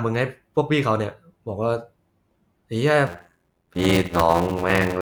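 From 3.06 s to the end, the speech takes on an 86 Hz buzz and slows to 0.625 speed at about normal pitch: a padded block size mismatch, zero-filling blocks that fit a 512-sample read.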